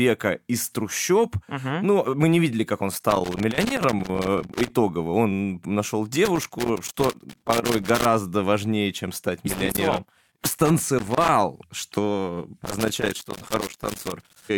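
Loose connector crackle hits the speech at 2.92–4.72, 6.25–8.05, 9.49–11.29 and 12.65–14.44 s. A worn contact chops the signal. Each burst is an irregular scratchy crackle lasting about 1.8 s.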